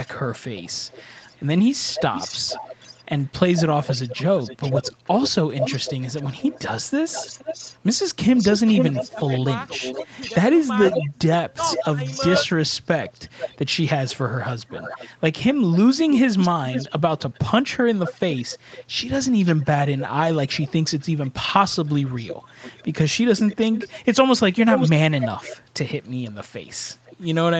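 From 0.04 s to the end of the clip, an echo leak is audible: a delayed copy of the speech trails the original by 484 ms, about 10 dB below it. The likely cause is a loudspeaker at the far end whose echo canceller did not fully remove its own microphone pickup and sent the residue back.

Between 9.06 and 10.16 s, and again between 11.48 and 12.5 s, the speech is suppressed in double talk. The level drops by around 10 dB in the first stretch and around 15 dB in the second, affecting about 0.2 s in total the first time and about 0.3 s the second. The likely cause is the echo canceller mistaking overlapping talk for echo and turning the talker down along with it.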